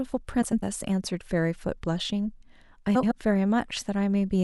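From 0.41 to 0.64 s, and again from 2.95 to 3.12 s, frames out of order: two neighbouring blocks, 104.5 ms and then 78.4 ms each, play swapped. This produces a garbled flutter. A spectrogram shows abrupt vertical seams and mismatched harmonics, with no time lost.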